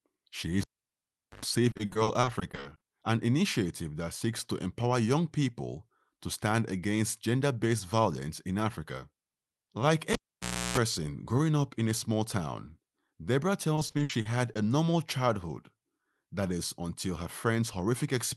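At 0.61 s the cable is pulled and plugged in. A sharp pop gives way to about 0.79 s of near silence, then a brief 50 Hz buzz as the tip touches, and a second pop at 1.45 s as the sound returns. On the waveform this shows as two spikes framing a flat stretch, with horizontal mains harmonics on the spectrogram just before the signal comes back.

From 1.71 to 2.83 s, just before "an initiative that seeks", repeated packet loss makes the sound choppy and robotic. Gaps of up to 40 ms are filled by stretching the last sound, and these patches take up roughly a third of the stretch. The spectrogram shows smeared, repeated vertical slices where the sound is being copied forward.

At 10.13 s the cable fault happens again before "growing up in a". This time there is about 0.6 s of dropout and a longer 60 Hz buzz of about 0.33 s, visible as a low striped band before the second pop at 10.78 s.

From 13.75 to 14.57 s, ending at "a normal childhood", the packet loss returns. 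Its gaps reach 60 ms and about a quarter of the span is concealed, which produces the same choppy, robotic texture.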